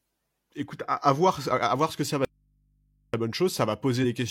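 Audio dropout to a faint residue, from 2.25 to 3.14 s: right after "voir ce que ça", the speech cuts off abruptly and about 0.89 s is lost. The gap is not silent. It holds a low mains hum roughly 40 dB below the speech, the sound of an input still live but no longer receiving the wanted signal. That points to a likely break upstream, with everything after it still running. The speech returns just as suddenly, with none of the gradual shape of a natural pause or a fade.

Compressed frames skipped, between 4.00 and 4.09 s: the speech jumps forward, losing about 50 ms in a single step. Whole blocks of the encoded stream never reached playback, either because they were absent or because the decoder rejected them as corrupt. The skip therefore falls on frame boundaries, and the speech carries on from slightly later than it should.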